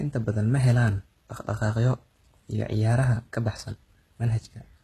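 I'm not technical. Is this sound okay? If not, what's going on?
No. Across the whole clip the speech has a gritty, metallic edge, and the s sounds come out lispy or fizzy. This is likely HE-AAC compression, which stores only the lower part of the sound and fakes the treble by copying it upward. That is why the top still sounds bright rather than muffled, as it would with ordinary heavy compression, yet rings false. Nothing is present above about 12.3 kHz.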